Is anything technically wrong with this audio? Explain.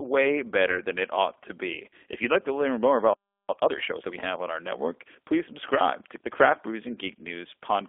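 Yes, there are four faults in this speech recording.

G.729 codec, throughout: the speech is rebuilt at 8 kbit/s from a vocal tract filter, a pitch predictor and a few pulses per subframe, and nothing outside roughly 300 Hz to 3.5 kHz survives. The result is a narrow, plainly rough and synthetic voice.

VoIP packet loss concealed by the speech codec, 0.71 to 0.79 s, just before "than it ought to": about 20 ms of audio went missing, which fits a single lost packet. The decoder stretched its last pitch and filter state to fill the gap, so the sound briefly turns into a stretched, fading tone or noise and then stays weakened while it recovers.

Playback stall, 3.13 to 3.49 s, right after "like to learn more": the output drops to silence for about 350 ms, then resumes where it stopped. The most likely cause is the player running out of buffered data or its audio thread being blocked.

Time-compressed catch-up, 3.49 to 4.19 s, leading into "have on our network": to recover the backlog from the stall, the player cuts out small pieces of audio and cross-fades the joins. 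The speech runs at 1.5 times normal speed without any pitch change, so it sounds hurried.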